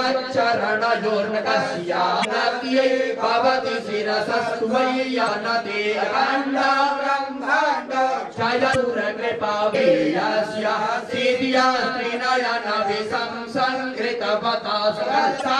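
Short bursts of damaged data in a compressed stream break into the sound at 2.21–2.25 s, 5.24–5.28 s, 8.71–8.76 s, 9.71–9.75 s and 15.38–15.42 s, each lasting about 40 ms. Corrupted bytes leave the decoder misreading frames until it locks onto the next valid header, so each event is a brief chirp, squawk, click or short hole. On a spectrogram each shows as a narrow vertical break. The waveform shows a jagged discontinuity at each burst.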